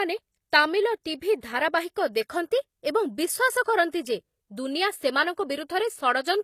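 Throughout the speech, the audio was likely encoded at a low bitrate and then re-saved at a high one, making it low-bitrate audio saved at a high bitrate. Nothing sounds above 14.9 kHz, and the first codec's artefacts remain, which fits a low-rate HE-AAC source inside a generous MP3.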